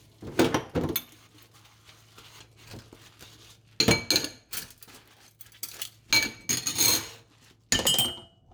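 No technical fault can be heard anywhere in this recording of sounds. Nothing in it calls for comment on the technical side.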